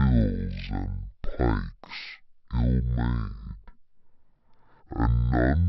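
From the first moment to the end, the speech drags at half speed and sits a full octave low, twelve semitones down, with a faint ghostly copy of the sound hovering in the upper half of the spectrum. This is stereo read as mono: the interleaved left and right samples were taken one after another as a single channel, so every frame became two samples, doubling the duration and halving the pitch, while the alternation between channels folds a mirrored image upward.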